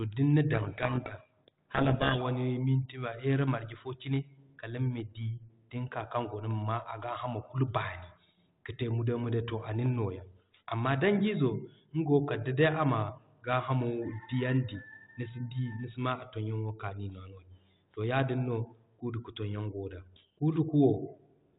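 Speech from 0.54 to 2.23 s is buried under harsh, grinding distortion. That is a codec payload misread: the G.726 code words arrive with their bit order reversed, so the decoder builds wrong prediction differences from valid-looking data. The surrounding telephone-band audio points to G.726 ADPCM at around 32 kbit/s.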